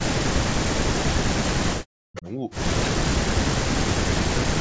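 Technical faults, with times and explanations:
0.05–0.91 s, 1.26–2.26 s, 2.89–3.49 s and 3.66–4.39 s, speech suppressed in double talk: in each stretch the speech sinks sharply, by about 40 dB at its deepest, with most of each span affected. The likely cause is an echo canceller facing both sides talking at once. Unable to tell the near talker from loudspeaker echo, it attenuated everything, pulling this side's speech down along with the echo it meant to remove.
2.15–2.31 s, echo leak: a faint, brief delayed copy of the speech appears, trailing the original by 317 ms and sitting about 20 dB below it. It is heard as a short ghostly scrap rather than a sustained repeat. This is likely loudspeaker playback at the far end reaching its microphone and slipping past an echo canceller that did not fully cancel it, so the sound returned down the line.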